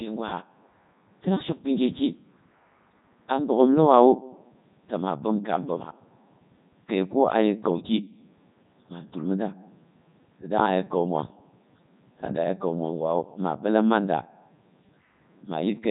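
The speech has passed through the Codec 2 vocoder for the whole clip. No waveform survives this path: only pitch, voicing, energy and a coarse spectral envelope are sent, and the decoder rebuilds the voice from sine waves. The damage is heavy, even in the top 3.2 kbit/s mode. The result sounds robotic and buzzy, with a synthetic tone, and nothing is heard above about 3.8 kHz, so the sound is dull and band-limited.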